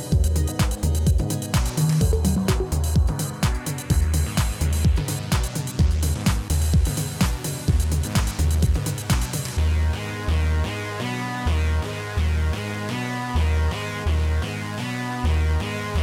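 No technical faults can be heard anywhere in this clip.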